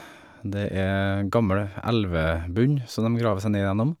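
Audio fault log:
No fault is heard in this speech clip.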